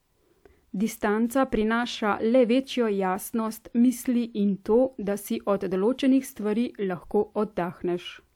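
No technical faults are audible.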